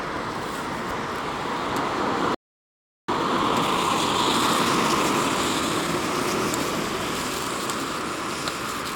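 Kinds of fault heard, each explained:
Playback stall: The player likely ran short of data or had its output thread held up, so nothing reached the output. The sound cuts off mid-flow at 2.34 s and stays silent for about 0.74 s before resuming at 3.09 s.
Time-compressed catch-up: To clear the backlog built up during the stall, the player drops short slices and cross-fades across the gaps. From 3.09 s to 6.03 s the sound runs at 1.25 times normal speed, hurried but at unchanged pitch.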